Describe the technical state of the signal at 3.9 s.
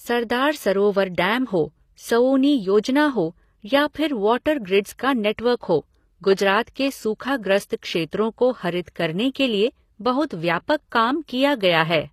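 Between 3.93 and 3.95 s there is pre-echo, right after "सौउनी योजना हो या" and before "फिर वॉटर". A brief hiss, about 21 ms long, leaks in just ahead of a sharp onset. The codec works in blocks and spreads its quantisation noise across each whole block. Here the attack lands late in its block, so noise sized for the loud part fills the quiet gap before it. The onset sounds smeared and soft.

Underneath, the speech carries HE-AAC compression, plainly audible throughout. Nothing sits above 14.9 kHz. The codec codes only the lower spectrum and rebuilds the treble by copying lower bands upward under a coarse envelope. That synthetic top end does not match the real harmonics, so sibilants come out gritty and metallic. The damage level likely points to a low bitrate, around 24 kbps.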